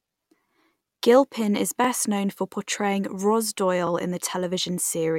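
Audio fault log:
1.84–1.87 s and 3.87–3.89 s, overlapping chunks: a brief stutter before "known for portraying" and "in the" as each 2 s chunk starts 25 ms early, replaying that slice.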